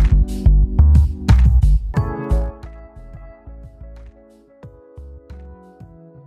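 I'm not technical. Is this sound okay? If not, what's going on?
No. Between 2.36 and 2.70 seconds there is zipper noise. The sound is being turned down a lot in that moment. The drop doesn't glide smoothly. It happens in many tiny jumps, about fifty every second. Each jump leaves a small click. Together the clicks make a fast ticking or zipping sound on top of the audio while the volume falls.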